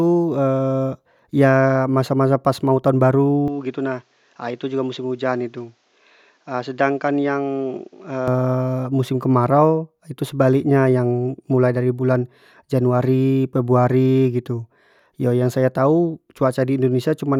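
At 3.48 s the speech suddenly loses its top end, with nothing above 7.6 kHz, and it drops roughly 5 dB in level, carrying a faint new background noise. It returns to full bandwidth at 8.28 s. The likely cause is an input switched to a poorer device, since the band, tone and noise all change at once with no silence at either switch. On a spectrogram the energy above 7.6 kHz is cut off flat across that span, and the waveform visibly shrinks.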